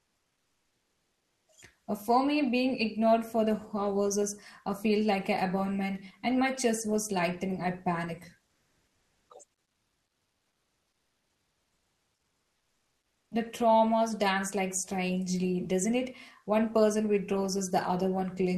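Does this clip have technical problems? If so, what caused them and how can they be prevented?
Yes. From 8.47 to 9.29 s and 9.63 to 13.31 s, the faint background becomes steady, featureless comfort noise, with about a 3 dB level change in the first stretch. The likely cause is Opus DTX halting transmission during pauses. Disabling DTX on the sender prevents it.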